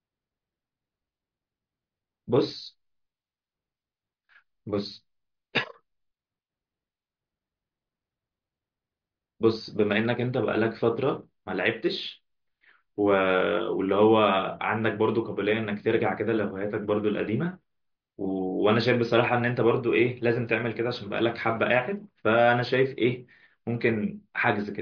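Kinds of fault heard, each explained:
No faults can be heard.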